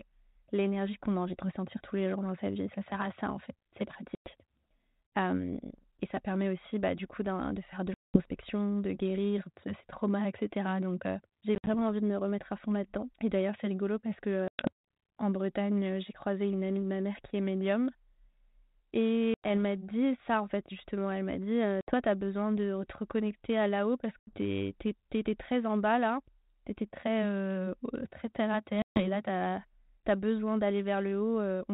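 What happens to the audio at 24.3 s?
From 24.19 to 24.35 s, packet loss on an ADPCM call leaves about 80 ms of silence; the desynchronised predictor then makes the resumed speech distort slightly and briefly.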